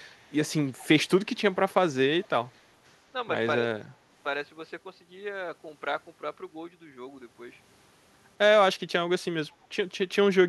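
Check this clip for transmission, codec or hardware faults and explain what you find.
Two kinds of fault are audible in this speech, both pointing to acoustic echo cancellation at a loudspeaker end.

Echo leak appears at 0.15–0.32, 0.78–0.87, 2.22–2.28, 2.55–2.62 and 9.63–9.67 s: faint scraps of the speech repeated 213 ms late, roughly 30 to 40 dB down. The likely cause is an echo canceller letting some loudspeaker pickup through. Unlike room reverberation, it is a distinct, fixed-delay copy rather than a smooth decay.

Speech suppressed in double talk occurs at 3.58–3.84 s, where the talker's level dips by around 25 dB for about a fifth of a second. This is likely the canceller ducking everything while both sides spoke at once. The level is pulled down rather than the sound stopping abruptly, which sets it apart from packet-loss gaps.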